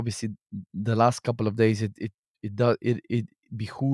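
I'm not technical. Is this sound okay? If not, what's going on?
Yes, nothing wrong can be heard in this recording.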